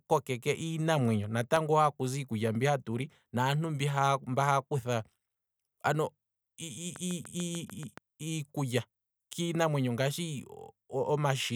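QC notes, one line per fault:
1.56 to 3.56 s, periodic USB or driver dropouts. Every half second, a sliver of speech vanishes, a fraction of a millisecond at a time, with nothing put in its place. There are about five of them, evenly spaced. Each skip joins the waveform on either side with a sudden step. That step is heard as a small regular tick. The ticks sound only while speech is present. They point to a driver or bus stall repeating at a fixed interval.
6.96 to 7.99 s, train of clicks. About seven sharp clicks land at a steady pace of 6.9 per second, ending just before "iikulya kiinamwenyo ngaashi". They are alike in shape and stand out, peaking at about 5 dB above the speech. They sit over the speech as a quick, even ticking. The regular spacing and matching shapes suggest a pulse source outside the sound itself, likely interference from nearby equipment or a faulty connection.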